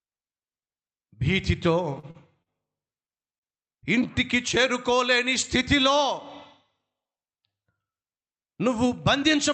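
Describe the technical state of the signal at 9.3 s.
At 9.3 s the speech is intact, with no dropout, glitch or distortion, only the limited top end of an ordinary Opus call path, which cuts off around 8 kHz.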